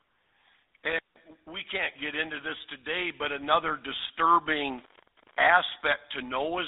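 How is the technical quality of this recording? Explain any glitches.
The recording has plainly audible damage from a GSM full-rate codec throughout, and one brief glitch from lost GSM frames.

The GSM full-rate codec affects the whole 7-second clip. The speech sits in a telephone band of roughly 300 Hz to 3.7 kHz, and the rate fits GSM's 13 kbps full-rate mode. The codec rebuilds the vocal tract from a filter model driven by a sparse, regularly spaced pulse excitation, so the voice takes on a buzzy, gravelly roughness. A band-limited but clean phone line would sound dull without that grainy texture.

The lost GSM frames occur from 4.34 to 4.37 s, just after "this today but another". The gap points to a single lost 20 ms frame. The decoder covers the gap by repeating the last good frame's settings, so the sound is held briefly as a rough, metallic ring. A simple dropout would be a silent gap or a click, but here the sound continues with a smeared, tinny sustain.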